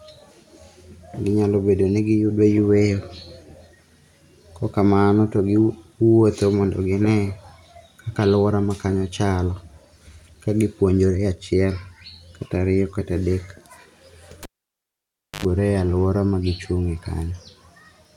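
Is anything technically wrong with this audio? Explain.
Yes. From 14.43 to 15.45 s the cable is pulled and plugged in while live: a pop, then about 0.97 s of near silence, then an 85 ms burst of 50 Hz mains buzz as the plug tip touches first, and a second pop as the speech returns.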